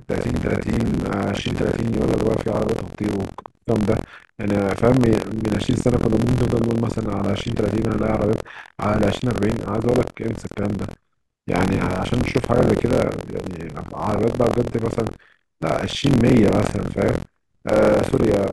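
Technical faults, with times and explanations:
Throughout, buffer tearing: the speech carries a steady robotic rattle at about 43 Hz, which fits a 1024-sample buffer being read by the hardware while the program is still writing it. In each period roughly a fifth of the buffer replays audio from around 70 ms earlier, spliced in with abrupt joins at both edges. Those repeating discontinuities produce the buzz, which disappears in pauses because stale silence sounds the same as fresh silence.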